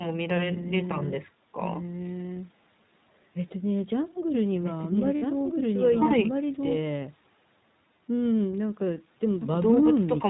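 Speech that runs through the iLBC codec for its whole length, and the coding damage is plainly audible: nothing above 4 kHz survives, and the voice has a slightly rough, synthetic edge. The grain fits iLBC's 15.2 kbps mode with 20 ms frames. Unlike a simple low-pass or a low-bitrate codec that smears detail across frames, each frame here is coded on its own. At 5.17 to 5.23 s there are lost iLBC frames, a gap of about 60 ms that fits three dropped 20 ms frames. The decoder fills it by repeating the last pitch cycle with added noise, so the gap sounds like a briefly held, faintly buzzy vowel rather than silence or a click. What separates it from a dropout or a jitter-buffer stretch is that the voice comes back cleanly almost at once, because the next frame needs nothing from the lost ones.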